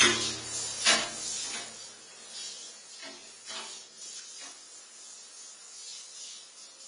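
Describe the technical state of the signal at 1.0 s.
At 1.0 s the signal carries AAC compression damage, present across the whole clip rather than confined to this moment. The likely cause is AAC-LC coding at a low bitrate, which fits roughly 24 kbps: with so few bits, the encoder cuts the band and quantises what remains coarsely. Nothing sounds above 10 kHz, so the sound is dull and smeared, with a plainly audible warbling, fizzy texture on anything sustained.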